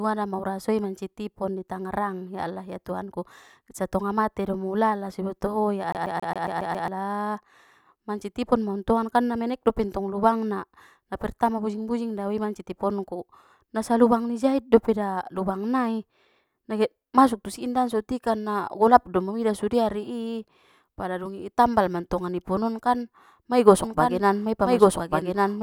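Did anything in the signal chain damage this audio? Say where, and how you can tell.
Yes. From 5.92 to 6.88 s the playback comes off a disc stuck on one turn: the same 137 ms snippet repeats seven times, with a tiny mute at every jump. A scratch keeps throwing the laser back one track each rotation, which gives that tight, even stutter.

From 23.84 s to the end there's a doubled audio track: a full-band copy about as loud as the original trails it by roughly a second, with no decay or room colour, and it cuts in abruptly. That's likely a second, slower capture path or an out-of-step edit.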